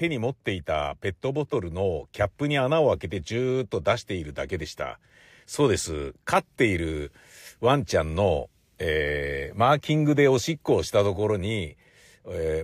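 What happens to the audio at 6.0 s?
Nothing goes wrong at 6.0 s: the audio is intact at that moment, with no dropout, click, distortion or other fault.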